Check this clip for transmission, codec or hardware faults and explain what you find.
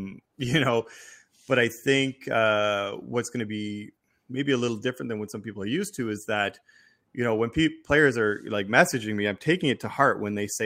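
No transmission, codec or hardware faults.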